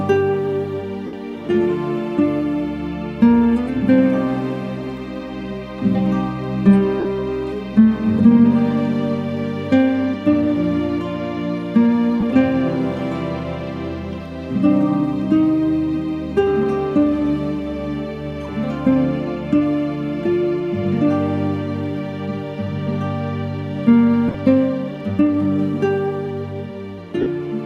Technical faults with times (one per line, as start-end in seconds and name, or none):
1.06-1.13 lost LE Audio frames
7.00-7.05 lost LE Audio frames
12.20-12.23 lost LE Audio frames
24.28-24.34 lost LE Audio frames
27.21-27.26 lost LE Audio frames